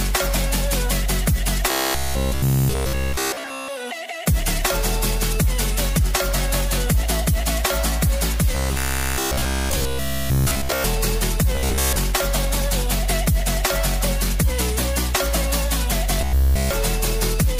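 A rigid, metallic buzz at 66.8 Hz is heard from 1.71 to 3.68 s, 8.55 to 10.84 s, 11.55 to 11.96 s and 16.21 to 16.71 s. It is robotic sound from repeated short buffers. The likely cause is audio arriving too seldom, so the last fragment is looped in its place. A 66.8 Hz buzz fits a fragment of about 15 ms. The looping replaces nearly all of the audio in three stretches and most of it at 11.55 s.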